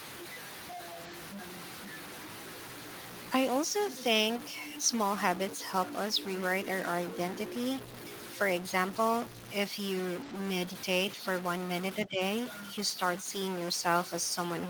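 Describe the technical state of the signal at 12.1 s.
At 12.1 s the echo canceller likely misread overlapping talk as its own loudspeaker echo, so speech suppressed in double talk pulls the voice down by about 10 dB between 12.05 and 12.21 s. Underneath, a stuck bit, likely from a faulty converter or data line, pushes about half the sample values off by a fixed step, adding noise or distortion across the whole clip.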